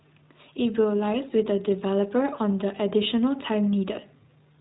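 iLBC codec damage runs throughout the speech. The codec codes each 20 ms frame independently, with no energy above about 3.9 kHz, giving a plainly audible muffled, narrowband sound that is a little rough and synthetic. The quality fits iLBC's 15.2 kbps mode.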